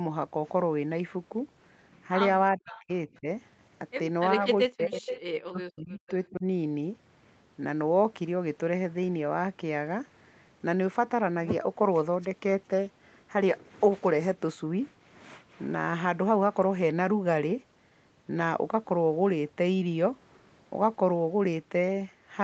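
From 2.57 to 2.89 s, speech suppressed in double talk: the voice sinks by as much as about 40 dB, which shows as a hollowed-out gap in the waveform and a dark band on the spectrogram. This is likely the echo canceller ducking both sides while both talk.

Within that gap, from 2.7 to 2.8 s, an echo leak adds a faint copy of the voice about 20 dB down, delayed by 383 ms. On the spectrogram it appears as a weak repeat of earlier speech.

A shallower suppression dip follows at 3.07 to 3.27 s (about 15 dB), then a deeper one at 4.64 to 5.03 s (about 40 dB).

From 4.99 to 5.21 s, a stronger echo comes back, only about 5 dB below the speech and delayed by 385 ms.

Suppression returns at 5.5 to 6.04 s (about 40 dB) and 6.3 to 6.45 s (about 20 dB).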